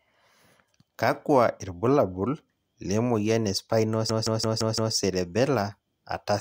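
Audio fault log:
4.10–4.95 s: system hang loop, right after "irbulabol le moyian e". One 170.67 ms slice of speech repeats exactly five times at 5.86 Hz, a machine-gun stutter. The system stalled while the hardware kept cycling one ring buffer, which fits an 8192-sample buffer.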